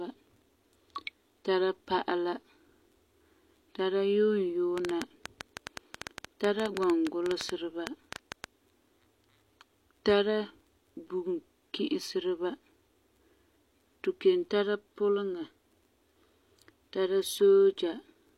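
From 4.78 s to 8.45 s a train of clicks runs over the speech: some thirty similar-shaped pulses at about 7.9 per second, spaced unevenly, standing around 15 dB above the speech. They tick on through the pauses, which separates them from a single click or from codec crackle that follows the speech itself. Something outside the recording, likely interference from nearby equipment or a faulty connection or supply, is injecting the pulses.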